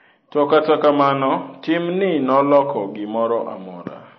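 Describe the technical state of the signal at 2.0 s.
At 2.0 s the speech carries audible MP3 compression damage, present across the whole clip rather than at this moment alone. Nothing sounds above 6 kHz, and the remaining band has a watery, swirly texture, with sibilants chirping metallically and attacks smeared. This is likely a starved encoder dropping weak frequency lines frame by frame, at a rate that fits about 24 kbps. A simple low-pass filter would dull the top in the same way but leave no swirl.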